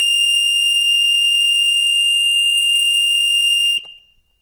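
From the start to the end, this music has Opus compression, most likely at a starved bitrate around 16 kbps. The music mode keeps each band's energy but fills the gaps with folded or noise content, so tones come out plainly grainy and rough.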